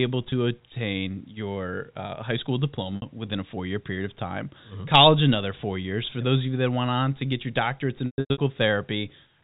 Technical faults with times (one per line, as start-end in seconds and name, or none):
0.30-0.32 packet loss with pitch repetition
2.96-3.02 packet loss with pitch repetition
8.06-8.38 packet loss with pitch repetition